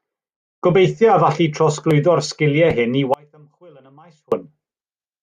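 A likely signal-path break from 3.14 to 4.32 s causes an audio dropout to a faint residue: the speech abruptly drops to a faint leak far below normal level.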